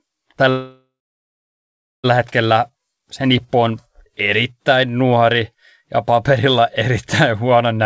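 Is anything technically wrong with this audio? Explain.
Yes. From 0.50 s to 2.06 s the speech stalls in a call audio freeze, likely caused by packets being held up in transit until the receiver's jitter buffer ran dry. The receiver stretched the last sound into a fading buzz or hiss, then about 1.13 s of silence, roughly 1.54 s filled in all. Unlike a packet-loss dropout, nothing is cut out. The speech resumes exactly where it stopped, about 1.54 s late. Throughout, the G.722 call path leaves nothing above 8 kHz.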